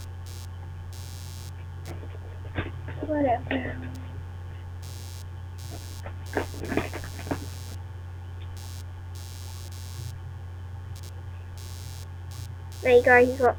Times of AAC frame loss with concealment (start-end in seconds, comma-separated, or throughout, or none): none